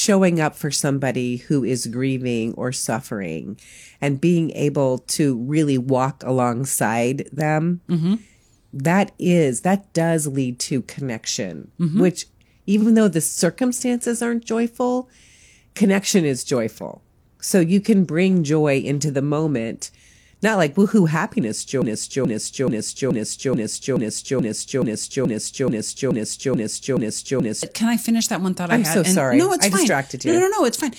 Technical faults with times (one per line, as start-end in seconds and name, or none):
12.77-12.83 repeated frames
21.82-27.63 broken-record loop
30.28-30.34 repeated frames